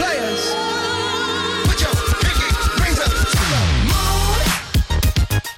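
Hard clipping runs through the whole clip: the signal is driven about 8 dB past what a stage can pass, so roughly one sample in twenty is sliced flat. Unlike soft saturation's rounded warmth, those square tops spray high harmonics, giving a brittle crackling fuzz on loud peaks.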